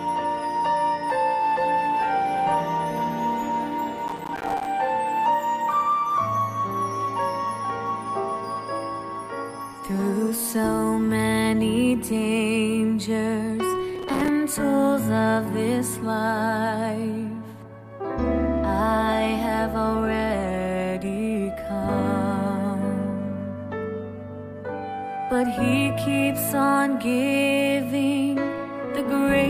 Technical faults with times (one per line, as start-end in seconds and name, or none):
4.08-4.66 processor overload crackle
13.95-14.28 processor overload crackle